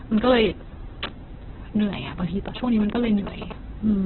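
Opus compression runs through the whole clip. The speech sounds rough and grainy, with nothing above about 4.1 kHz. That narrowband, heavily damaged sound is likely from Opus in its CELT music mode at a very low rate, which fits roughly 8 kbps, filling starved bands with noise.

GSM signalling bursts sound from 2.48 to 3.52 s. A nearby 2G phone sends short groups of radio bursts, and the audio circuit rectifies them. The result is a galloping dit-dit-dit of short buzzes at about 217 Hz, roughly 10 dB below the speech.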